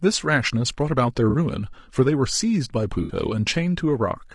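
Across the whole clip the speech sounds rough and grainy, with noise between the harmonics. That's likely low-delay AAC compression (AAC-ELD), and the level of damage fits a low bitrate of around 32 kbps. At 1.29 to 1.35 s and again at 3.03 to 3.11 s there's AAC frame loss with concealment. The decoder patches the gaps from earlier spectrum, which leaves brief smeared, noisy patches of about 40 and 60 ms.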